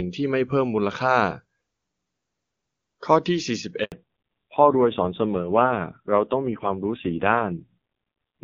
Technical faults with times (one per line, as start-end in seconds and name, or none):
3.84-3.92 handover gap
3.92-8.44 fallback to narrowband